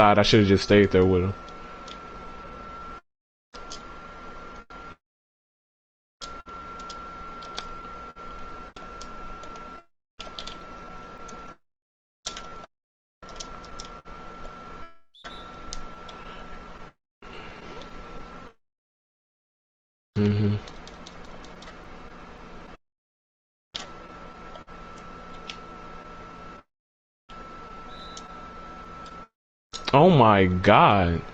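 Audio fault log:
throughout: clock drift between sender and receiver. The sending device's audio clock runs a few percent slow relative to the receiver's, so samples arrive slightly too slowly and the jitter buffer keeps draining toward empty. The receiver has to keep stretching what it has to avoid running dry, which leaves the whole clip with small, unevenly spaced timing hiccups and a faintly unsteady pace rather than one clean break.
0.09–30.96 s: repeated timing corrections. To stay in step with the slow sender, the receiver repeatedly repeats short slices of audio, always lengthening and never cutting, so playback runs at about 98% speed and roughly half a second is added over the span. Each insertion is tiny and lands at irregular intervals, so the effect is a slightly dragging, lurching tempo with occasional soft stutters rather than any obvious glitch.
6.41–11.50 s, 13.42–18.52 s and 20.72–30.01 s: scattered short gaps. 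Packets arrive late or go missing one at a time, about ten in each of the first two stretches and about twenty in the last. Each hole is covered by extending the preceding sound, the longest fill being around 50 ms, and only a few percent of each stretch is concealed. The result is brief ticks and smeared, held fragments dotted through otherwise clear sound.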